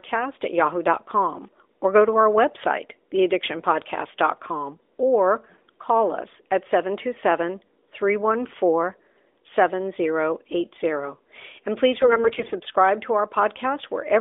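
From 12.00 to 12.55 s, the speech suffers AMR bit errors. For about half a second, the stream runs through a stretch of damaged frames. Roughly a tenth of the less protected bits arrive flipped. The frame checks still pass, so the decoder plays them. Its excitation pulses land in the wrong places. Fine pitch, gain and spectral values drift. Pitch and loudness hold roughly steady. The voice turns hoarse, scratchy and gargly over the narrowband 300 Hz to 3.6 kHz line.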